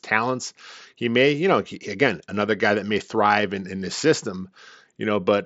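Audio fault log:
No faults found; the speech runs over a wideband Bluetooth mSBC headset link, whose band limit leaves nothing above about 7.7 kHz.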